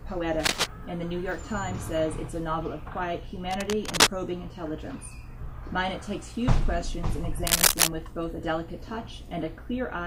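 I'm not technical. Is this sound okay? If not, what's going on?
No, there's a problem. Three times the sound gets covered by a short scratchy, rustling burst: from 0.39 to 0.67 seconds, from 3.51 to 4.09 seconds, and from 7.45 to 7.88 seconds. The last one is the loudest of the three. This is cable scratch noise. It's likely caused by a worn cable, plug or knob being moved, so the electrical contact keeps flickering and adds crackly noise on top of the sound.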